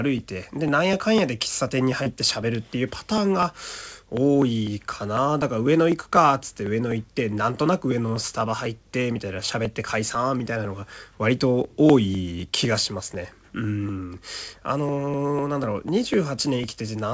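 A speech recording carried over a call path, with nothing above 8 kHz, consistent with a G.722 wideband codec. From 0.19 s to the end, periodic USB or driver dropouts skip tiny slices of audio every 0.25 s, giving steady ticks that, unlike network loss, keep an exact clock-like rhythm. At 2.03–2.09 s, a short concealed packet loss replaces about 30 ms with synthesized continuation, heard as a single brief smear rather than a sharp, repeating click.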